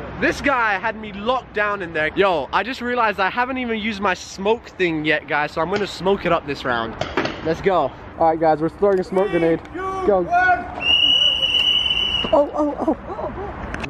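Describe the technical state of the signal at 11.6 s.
At 11.6 s the signal is intact, with no audible fault at that moment.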